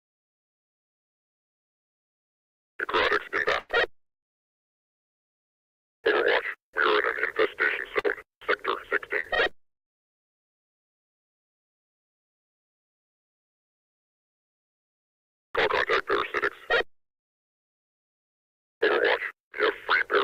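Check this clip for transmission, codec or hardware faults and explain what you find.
The clip shows two kinds of network transmission fault: three bursts of packet loss and one stretch of scattered short gaps.

Burst of packet loss, at 3.59 to 3.71 s, 7.99 to 8.06 s and 19.46 to 19.53 s. A run of packets arrived too late or not at all, and the receiver filled each hole by extending the last sound while fading it down. The fills last about 98 ms, 50 ms and 50 ms. When playback resumes, about 100 ms, 60 ms and 60 ms of the original audio has been skipped, so each event is heard as a brief held, fading tail followed by a jump forward.

Scattered short gaps, between 9.20 and 11.43 s. Within this span, about four isolated packets went missing at separate points, and each was patched by continuing the preceding sound. Together the patches cover roughly 100 ms, or about 5 percent of the span, and the longest is around 50 ms. 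They are heard as short smears or ticks with clean audio in between. In total about 120 ms of original material is lost across the stretch.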